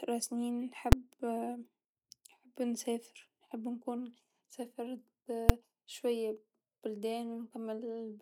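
A calculation in the processing chain produced invalid or infinite numbers, which were clamped to full scale, so the output was driven to its maximum level for a whole processing block. It happens twice in this speech, at 0.92 s and again at 5.49 s. Each burst lasts about 5.33 ms, which fits a 256-sample block. Because each block is this short, each event is heard as a single sharp, very loud bang rather than separate pops with silence between.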